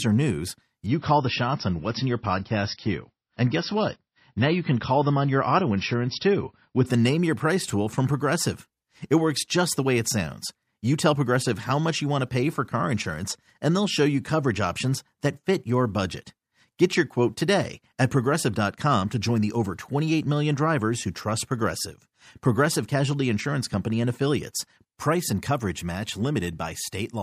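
Just after "or news", at 0.86 s, the speech suddenly goes dull and watery, with nothing above about 5.8 kHz and rising codec artefacts. It snaps back to full brightness at 6.86 s with no gap at either edge. This is an adaptive stream at a lower bitrate: for those six seconds the player dropped to a much leaner encoding, consistent with a fall from 128 kbit/s MP3 to around 24 kbit/s, before switching back.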